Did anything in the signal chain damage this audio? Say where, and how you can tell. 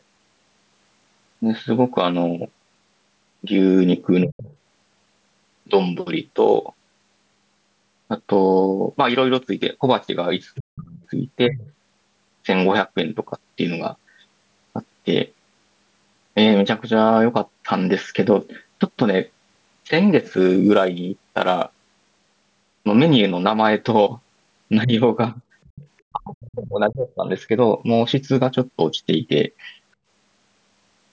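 Yes. The call processing stage pumped the talker down in speech suppressed in double talk at 4.24–4.47 s, 10.62–11.63 s, 24.84–25.41 s and 26.12–27.49 s. The echo canceller likely mistook overlapping talk for echo. Dips reach around 40 dB.

The same call processing lets the other side's voice leak through at 4.48–4.56 s, 10.55–11.04 s, 11.65–11.73 s and 25.64–25.88 s. Echo cancellation likely left residual loudspeaker pickup, sitting roughly 15 to 30 dB under the talker. It is loudest near 10.6 s.

Sample clock jitter sits in the converter from 20.18 to 22.31 s. A rough hiss rides on loud, bright syllables and disappears in pauses. Timing error of a few microseconds puts an error floor about 35 dB below the signal.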